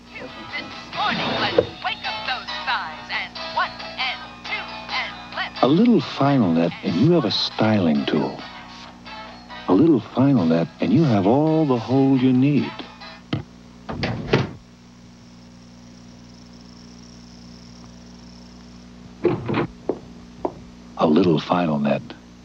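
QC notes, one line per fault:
Nothing to flag here; I listened all the way and heard no faults anywhere in the audio.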